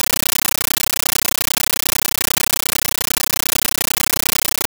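A compressed stream played as audio runs throughout: an AC-3 bitstream was passed on as ordinary samples instead of being decoded. Each 13.3 ms burst of coded data, followed by silent padding, repeats 31.25 times a second, giving very loud, chattering static in place of the speech.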